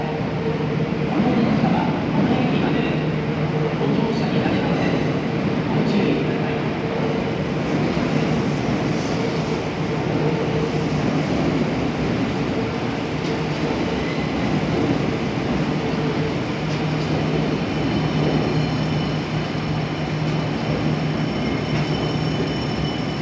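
Nothing is technically wrong with this audio, which carries the normal band limit of a call path with nothing above 8 kHz.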